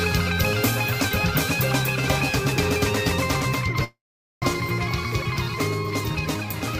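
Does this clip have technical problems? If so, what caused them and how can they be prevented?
Yes. From 3.84 s to 4.46 s the sound breaks off: the last moment is stretched into a buzzy, fading tail, then near-silence for nearly half a second, and when the audio resumes about 0.4 s of it is simply gone. This is likely a long network dropout, where packets stopped arriving and the receiver concealed the gap with a fading continuation before giving up and skipping ahead. Redundancy such as forward error correction, or a steadier network path, would prevent it.

Right after, from 4.54 s to 6.61 s, the audio runs about 8% fast while keeping its pitch, sounding hurried. This is a jitter buffer speed-up: the buffer held more audio than it aims for, so the receiver trimmed many tiny pitch-period slices, roughly 150 ms in all, to bring the delay back down. Spreading the catch-up more gently over time, or reducing network jitter, would prevent it.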